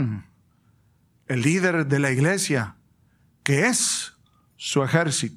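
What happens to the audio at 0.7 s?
Nothing goes wrong at 0.7 s; the speech there carries on intact, with no dropout, click or distortion.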